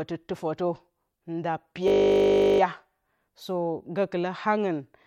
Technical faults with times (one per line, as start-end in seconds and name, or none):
1.88-2.60 system hang loop